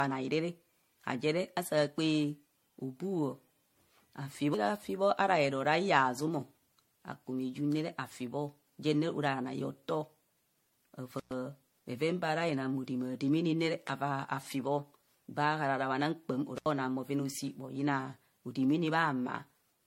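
From the start, the speech has a swirly, smeared, hollow quality. Consonant attacks blur. Nothing is present above 16.5 kHz. This points to generation loss, likely from repeated MP3 coding at around 64 kbit/s, perhaps seven passes. Each pass quantises again on a shifted frame grid. The noise and spectral holes build up, so the sound is worse than one pass at that rate would give.

At 11.18 to 11.32 s an intermittent contact breaks the signal. The sound drops out for about 112 ms. A crackle marks each edge of the gap, and faint hiss fills it. A second dropout follows at 16.57 to 16.66 s, open for about 76 ms, with the same crackle at both edges. Both fit a loose cable or plug briefly losing its connection, then closing again.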